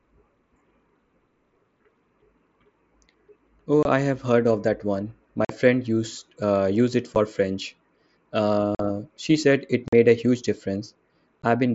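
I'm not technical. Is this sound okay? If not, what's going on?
No. This is unconcealed Bluetooth headset packet loss: tiny chunks of voice sent from the headset to the phone went missing, and nothing was done to cover them. You hear short, sharp dropouts in the speech at 3.83–3.85 s (just before "I have heard of"), 5.45–5.50 s, 7.15 s (just after "used uh use it"), 8.75–8.80 s (just before "she said it"), 9.88–9.93 s, and 11.42 s.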